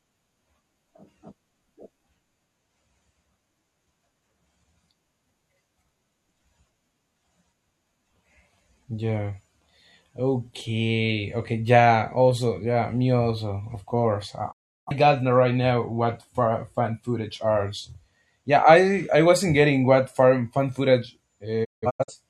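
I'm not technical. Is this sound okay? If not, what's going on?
No. The speech drops out twice, a fault called a digital broadcast dropout. The receiver lost the signal and went quiet until it picked it up again. At 14.51 s, right after "also of course I", the sound fades out fast and is gone for about a third of a second, until 14.92 s. At 21.63 s, after "what fan fan footage", it breaks into several short holes until 22.14 s. The longest hole lasts about 0.17 s. Whatever was said in those gaps is lost.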